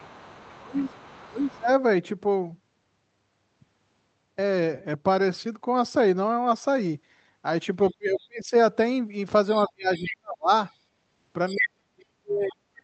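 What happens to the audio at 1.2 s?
Speech suppressed in double talk runs from 0.58 to 1.69 s. While both sides talk at once, the talker's voice dips deeply, loses its top end or drops out in pieces, about 0.7 s in all. The likely cause is an echo canceller that could not tell its own talker from the loudspeaker echo and turned both down.

The other side's voice leaking through, from 0.0 to 1.58 s, overlaps this. A faint second voice sits well below the talker, probably because the echo canceller left loudspeaker sound in the microphone signal.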